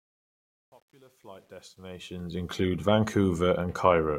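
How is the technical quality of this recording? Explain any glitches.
The recording's technical quality is let down by its opening. Truncation distortion on a fade runs from 0.0 to 2.51 s, as the speech fades in from the start, worst up to 1.89 s. The fade keeps too few bits, which fits about an 11-bit word length, and adds no dither. Quiet passages become coarse steps, sounding gritty until the level rises.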